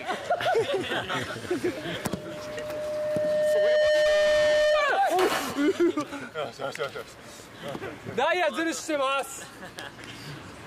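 From 1.89 s to 5.01 s a loudspeaker feedback squeal takes over. A steady tone at 606 Hz rises out of the sound, swelling over roughly two seconds until it sits about 5 dB above the programme. The microphone was picking up its own loudspeaker, and at that one frequency the loop gain passed unity, so the tone kept feeding itself. What separates it from mains hum or an electronic whine is that gradual self-reinforcing build.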